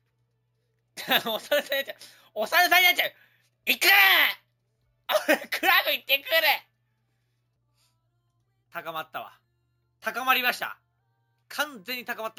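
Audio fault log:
Throughout, imaging from sample-and-hold upsampling: samples repeated from 16 kHz to 48 kHz leave mirrored spectra, first image 8–16 kHz about 13 dB down, fizz tracking level, moving against pitch.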